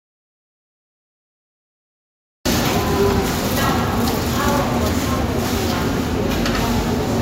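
A recording of sounds opens with an audio dropout to silence. From the first moment until 2.46 s there is nothing but silence, with no room tone. The sound then enters abruptly. The input was likely lost, perhaps through a disconnected device or a mute.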